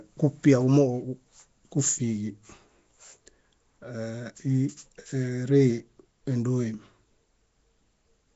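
Nellymoser compression throughout: the speech is smeared and underwater-sounding with a rough, hissy halo and nothing above 7.7 kHz, likely from Flash's Asao codec filling starved bands with noise, consistent with 32 kbps.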